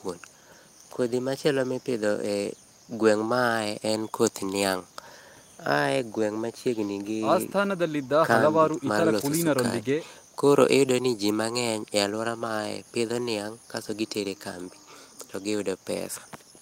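No technical faults can be heard anywhere in the speech. There is nothing at any point in the audio that needs a timestamp or a correction.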